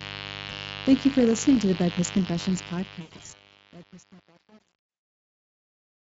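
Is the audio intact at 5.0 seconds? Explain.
No. At 5.0 s the sound collapses into a fading, extrapolated remnant of the voice from 4.89 to 5.03 s. This is VoIP packet loss concealed by the speech codec: about 140 ms of packets went missing, which fits roughly seven lost frames. The decoder filled the gap by extrapolating its last pitch and filter with decaying gain, and the voice stays weak for a while after the packets return.

Under that, the audio is gritty. This is truncation distortion on a fade, starting at 2.46 s and at its worst from 2.58 s to the end at 6.15 s. The stage applying the fade keeps too few bits, which points to an 8-bit path with no dither. As the level drops, the waveform breaks into coarse steps that sound gritty.

A steady, raspy buzz also runs through this moment, roughly 15 dB below the speech. This is mains buzz: sharp spikes twice per 50 Hz mains cycle leak in, so harmonics of 50 Hz extend up into the kilohertz range.

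The speech is also hoarse and noisy, with a hissy, shapeless top end. That is the Speex codec, and the damage is plainly audible. The bitrate fits a mode around 20 kbps. The excitation gets too few bits, and the band above 8 kHz is only a shaped noise fill.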